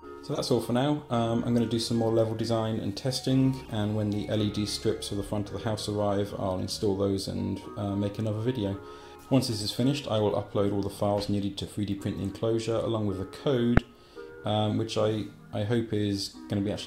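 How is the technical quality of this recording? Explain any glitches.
Four brief decoding glitches mar the quality. Corrupt frame decoded, at 0.33–0.39 s, 3.65–3.68 s, 9.61–9.66 s and 13.77 s: flipped bits in compressed frames were decoded anyway, misplacing energy in frequency, so each spans a few frames as a chirp or noise blip, loudest at 13.77 s (about −5 dBFS), faintest at 3.65 s (about −35 dBFS).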